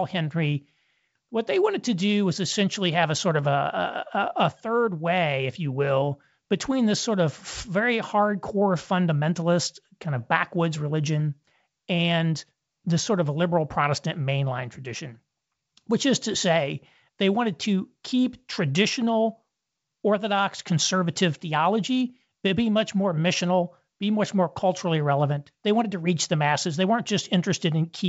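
There are no technical faults to describe in time order in this speech clip, which comes through G.722 wideband telephone coding at 64 kbit/s.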